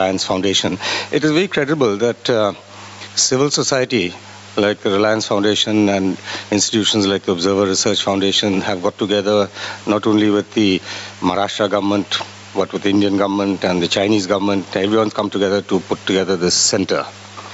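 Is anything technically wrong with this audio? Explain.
Yes. Throughout the clip there is gain pumping. The input gain was likely set far too high, so a fast limiter or compressor clamps down on every loud sound and lets go in the gaps. The gain swings by around 15 dB, squashing loud and soft parts together. All of this comes through a call path whose audio stops at 8 kHz.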